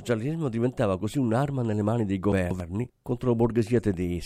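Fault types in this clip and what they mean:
Chunks out of order: right after "un'arma nelle mani dei", between about 2.32 and 2.60 s, a block of audio around 93 ms long turns up two blocks late and plays after material that should follow it. Nothing goes missing, but the sequence gets shuffled, so that stretch of speech sounds briefly jumbled, with three hard joins where the reordered pieces butt against each other.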